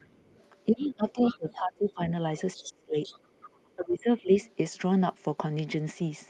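Speech recorded through a call, with a second voice leaking through underneath it at 0.0 to 0.41 s, 0.78 to 0.83 s, 1.2 to 1.54 s, 2.57 to 2.63 s and 3.03 to 3.49 s. The leak is faint at first, around 30 to 35 dB below the talker. It is strongest near 1.2 s at roughly 15 dB down and sits around 20 dB down later. This is likely loudspeaker playback of the other side reaching the microphone and not being fully removed by the echo canceller. Some of the leaks overlap speech suppressed in double talk, which occurs at 0.66 to 2.01 s, 2.55 to 2.97 s and 3.76 to 4.32 s. In these stretches the talker's level dips by roughly 20 to 25 dB, with about a second of affected sound in the first stretch, around 0.4 s in the second and around half a second in the third. This is likely the echo canceller failing to separate near-end speech from the echo while both sides talk, and attenuating everything together.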